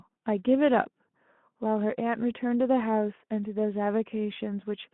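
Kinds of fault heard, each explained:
Sudden gain jump: The level likely changed in a single step with no ramp, as when a gain setting or bit shift is applied at once, so the speech and the background noise together drop by about 6 dB for a short stretch from 2.0 to 2.16 s.
VoIP packet loss concealed by the speech codec: One 20 ms packet went missing around 4.33 s, and the Speex decoder filled the gap by extending its last pitch and filter state, so the speech smears briefly into a fading, stretched sound before recovering.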